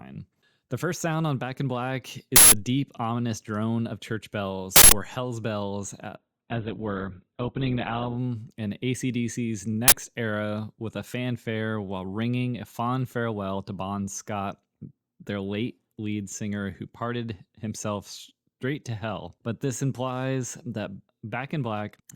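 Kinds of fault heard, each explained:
Uninitialised buffer: loud bursts of harsh digital noise at 2.36 and 4.76 s and a loud crack at 9.88 s, from blocks played before audio was written, leaving stale memory as samples.
Adaptive stream at a lower bitrate: from 6.16 to 8.16 s the treble vanishes above 4.5 kHz, as the stream abruptly switches to a much lower-bitrate version without any gap.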